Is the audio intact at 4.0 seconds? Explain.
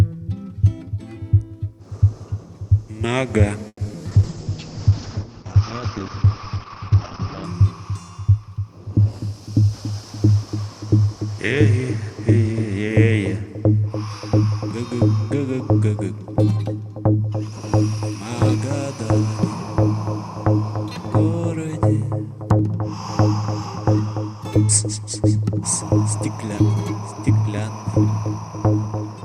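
No, 4.0 seconds falls inside a stretch of repeated packet loss (robotic sound) running from about 3.67 to 4.07 s. Five gaps hit that 0.4 s window. Each time, the receiver papered over the hole by stretching out the last bit of audio it had, filling 160 ms that way, while another 80 ms simply dropped out. The longest gap is 120 ms. With around 40% of the span patched, it comes across choppy, with pieces missing.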